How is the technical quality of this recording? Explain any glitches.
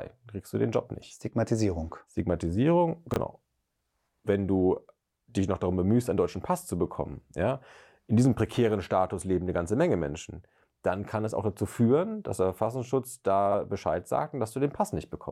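Two short glitches, both chunks out of order. At 3.12–3.16 s a 20 ms chunk plays one chunk late, and at 13.46–13.54 s one arrives three chunks late. Each creates three hard joins, heard as a garbled jumble. Unlike a dropout, nothing goes missing; the sound is only reordered.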